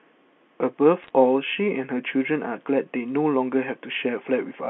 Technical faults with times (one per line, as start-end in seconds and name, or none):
1.03-1.10 bit errors on a digital phone line